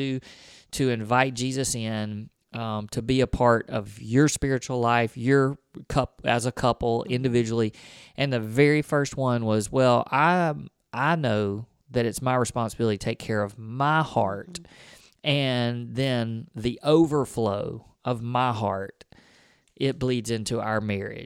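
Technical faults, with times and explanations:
No technical faults can be heard in the speech recording; the signal stays continuous and steady in level throughout.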